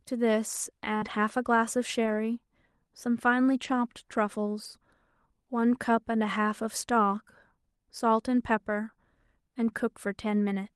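Right around 0.97 to 1.04 s there's a short concealed packet loss: about 40 ms of speech never arrived, so the receiver stretched the previous sound over roughly 42 ms and blended back in. You hear it as a quick smear or wobble.

Overlapping that, from 1.02 to 1.12 s, and again at 2.06 to 2.16 s, you get a lost packet rebuilt from error correction. Each spot covers about 60 ms, which fits three packets replayed from the low-bitrate Opus copies carried in the following packets. Those stretches sound a bit rougher and grainier than the speech around them. The same thing happens at 3.64 to 3.78 s over about 80 ms, likely four packets. The underlying Opus call path at 32 kbps keeps the audio band limited to about 12 kHz throughout.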